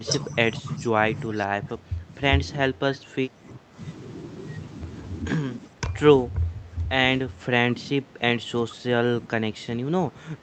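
From 0.0 to 3.78 s, the echo canceller likely mistook overlapping talk for echo and suppressed the speech, so the voice dips by up to about 15 dB for roughly two seconds. Within that span, at 0.56–0.88 s and 1.36–1.41 s, an echo leak likely let through a faint copy delayed by 394 ms, about 25 dB below the speech. The same speech suppression in double talk returns at 5.3–6.94 s, 7.26–8.85 s and from 9.2 s to the end, with dips of up to about 15 dB.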